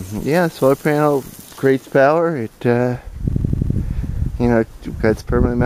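At 3.33 s there's a system hang loop running to 3.76 s. The system froze while the hardware kept replaying one 85 ms slice, which fits a 4096-sample buffer, five times at 11.7 Hz. It's a machine-gun stutter, and essentially nothing is lost afterward.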